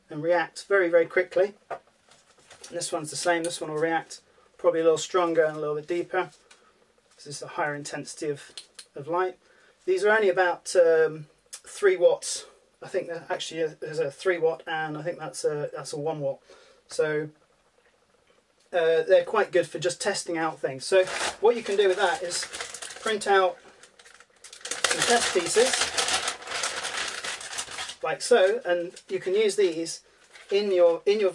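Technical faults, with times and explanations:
No technical faults detected.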